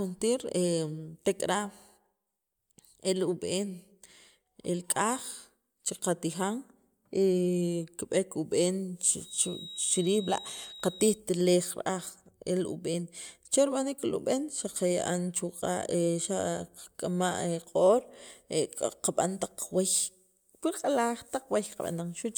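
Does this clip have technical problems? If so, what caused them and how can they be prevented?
Yes. A feedback whistle sits under the speech from 9.17 to 11.22 s: a thin, steady tone at 3.8 kHz, about 15 dB below the speech, swelling and fading slowly in level. The likely cause is a loudspeaker-to-microphone loop running just at the edge of instability, where one frequency keeps recirculating without building into a full howl. Reducing monitor gain near the microphone, increasing the distance between them, or notching around 3.8 kHz would prevent it.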